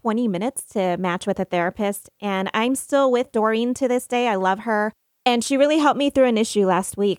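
No technical faults can be heard anywhere in the recording.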